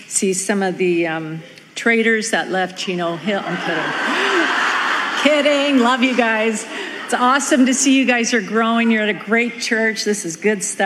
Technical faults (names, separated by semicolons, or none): none